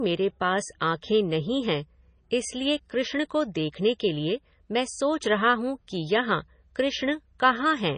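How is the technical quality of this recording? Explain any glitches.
The quality is poor, with heavy compression damage across the whole clip. MP3 compression, throughout: a likely bit-starved encoder, fitting about 24 kbps, removes everything above 9.4 kHz and drops weak frequency lines, leaving the speech dull, watery and swirly.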